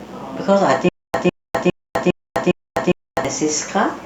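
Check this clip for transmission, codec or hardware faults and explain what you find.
Two faults are present: a mains buzz throughout and a stuttering dropout between 0.89 and 3.25 s.

Mains buzz runs the whole clip, well below the speech. Switching spikes twice per 60 Hz cycle give a raspy buzz, seen as stacked harmonic lines reaching kHz.

Stutter with silent gaps from 0.89 to 3.25 s: a 153 ms burst repeats five times, each followed by 253 ms of flat digital silence, every 406 ms. It is likely from a stalled stream replaying its last fragment. The waveform shows identical blocks separated by empty gaps.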